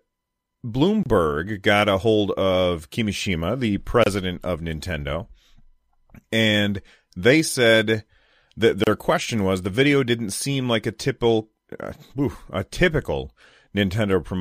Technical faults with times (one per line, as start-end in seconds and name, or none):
1.03-1.06 gap at a join of encoded pieces
4.04-4.06 gap at a join of encoded pieces
8.84-8.87 gap at a join of encoded pieces